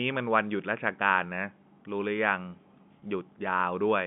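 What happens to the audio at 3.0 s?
At 3.0 s there is a packet loss with pitch repetition. About 20 ms of audio, from 3.0 to 3.02 s, never reached the receiver, which fits a single lost packet. To cover the hole, the decoder kept repeating the last pitch period it had. Because the gap is so short, the sound briefly holds steady with a slightly buzzy, frozen quality before normal speech resumes, all within the narrow G.711 telephone band.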